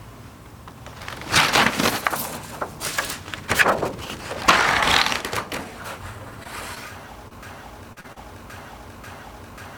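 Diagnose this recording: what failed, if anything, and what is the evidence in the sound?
Short concealed packet loss at 6.43–6.47 s, 6.75–6.78 s and 7.28–7.33 s: network dropouts, each patched by extending the preceding sound, leaving brief smears.

Broken-record loop from 7.43 s to the end: a 0.54 s fragment repeats back to back, likely a stalled stream or player resending its last buffer, so the intended audio is lost.

Repeated packet loss (robotic sound) at 7.93–8.18 s: four network gaps, the longest 39 ms, concealed by extrapolation across about 45% of the span, giving choppy sound.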